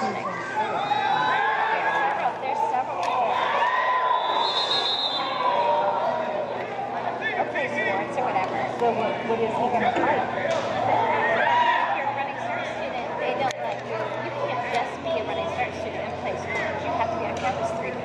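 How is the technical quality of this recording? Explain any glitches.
The technical quality of the recording is sound, with no glitches to explain.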